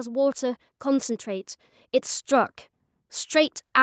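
Speech passed through a call chain, with nothing above 8 kHz. From 0.05 s to 1.56 s the level climbs by about 4 dB, a case of automatic gain rising. The gain control judged the input too quiet and raised its gain gradually, so voice and background noise swell together over that second and a half rather than the talker getting louder. The 8 kHz ceiling fits a wideband call codec such as Opus.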